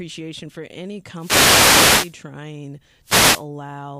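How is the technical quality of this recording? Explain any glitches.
The recording has two wireless microphone noise hits. The first runs from 1.16 to 2.17 s, starting just after "for any". The second runs from 3.03 to 3.46 s. In each, the radio link from an analogue FM microphone fades as reflected signals cancel. The receiver's noise floor rises, giving a burst of hiss and static. The longer first hit lasts about a second.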